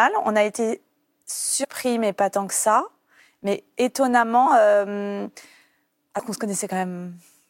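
Compressed frames skipped three times in this speech: whole coded frames went unplayed, so the audio jumps ahead by roughly a tenth of a second at 1.63–1.65 s (just before "mais pas tant que") and at 4.45 s, and slightly less at 6.18 s.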